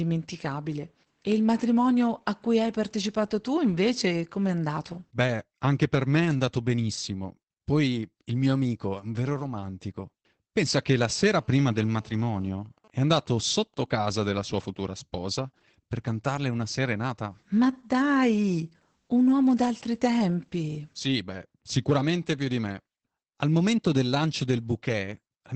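The whole clip carries Opus voice compression: nothing above about 8.8 kHz, and the speech sounds muffled and a bit hoarse, which fits SILK mode at around 12 kbps. From 11.0 to 12.48 s there's GSM phone buzz, a phone mid-call whose radio bursts get rectified into a raspy, steady 217 Hz buzz about 32 dB below the speech. Then from 12.54 to 14.94 s come GSM signalling bursts, the same phone idling while its user is silent, heard as even ticks with a longer buzz twice a second roughly 30 dB down.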